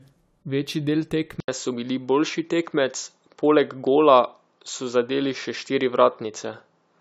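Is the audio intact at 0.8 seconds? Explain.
No. At 0.8 s, as throughout, there's generation loss: swirly, hollow speech with blurred attacks, likely from about four AAC re-encodes. Errors compounding across shifted frame grids sound worse than a single encode near 64 kbit/s would.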